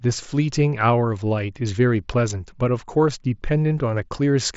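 The speech carries no technical fault; it comes through a Bluetooth mSBC headset codec, which caps its content at about 7.7 kHz.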